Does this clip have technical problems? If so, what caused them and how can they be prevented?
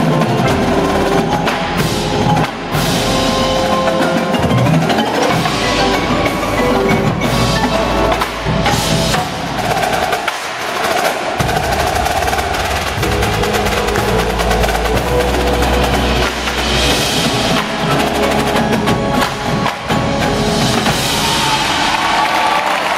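Yes. Gain pumping runs through the whole clip: the level is pulled down on each loud sound and rises again in the quieter stretches, with a swing of around 20 dB. The likely cause is input gain set far too high, with a fast limiter or compressor pulling it back, which squashes loud and soft parts together. Unlike clipping, the fault is the moving level. Setting the input gain correctly, with headroom, prevents it.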